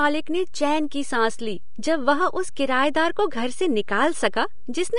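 A DC offset runs through the whole clip. The waveform sits shifted from zero, which wastes headroom and leaves steady energy at the very bottom of the spectrum.

The speech also carries plainly audible lossy coding damage throughout, likely from Vorbis compression at a low rate, around 35 kbps. Nothing remains above 10.6 kHz, and the treble sounds hissy and grainy.

At 4.32 s there is pre-echo. Coding noise spreads about 11 ms ahead of a sharp attack, so a short hiss precedes it and the attack sounds soft or smeared.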